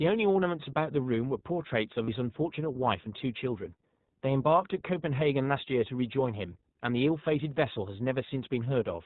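Throughout, the speech carries plainly audible iLBC codec damage. Everything above 4 kHz is removed, leaving a rough, slightly synthetic narrowband tone consistent with the 20 ms, 15.2 kbps mode. On a spectrogram, energy stops at a flat ceiling near 4 kHz.

From 2.04 to 2.10 s, lost iLBC frames leave a gap, consistent with two dropped 20 ms frames. The decoder repeats the last pitch cycle mixed with noise, so the gap sounds like a held, faintly buzzy vowel. The waveform shows a repeating cycle, and the spectrogram shows steady harmonics smeared with noise. Normal speech resumes almost immediately afterward.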